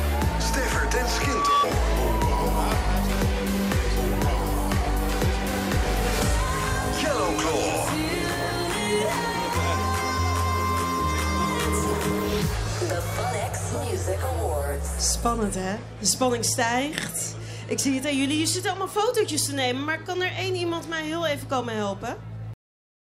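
From 1.08 to 1.67 s a microphone picks up the loudspeaker it feeds, and the loop gain tops unity at 1.1 kHz. That loudspeaker feedback squeal swells over a bit under half a second into a steady howl sitting a few dB above the surrounding sound.

At 22.54 s the final buffers were never written or played, giving a cut-off end. The audio stops mid-sound and falls straight to digital silence, with no decay or fade, for the remaining half second or so.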